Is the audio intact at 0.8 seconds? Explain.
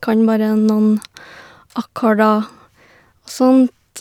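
Yes, at 0.8 seconds the speech plays through cleanly, with no dropout, click, distortion or other fault at that moment.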